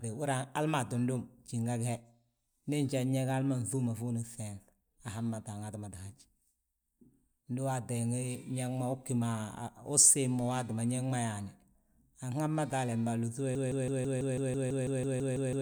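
Speech throughout, and right at 13.55 s it falls into a broken-record loop that holds until the end. A snippet of about 165 ms plays back to back, 13 times over, each copy identical, so you get that stuttering machine-gun repeat instead of the rest of the speech. Whatever should have been said in those last couple of seconds is just gone. Most likely the player or stream stalled and kept re-sending the last chunk it had buffered.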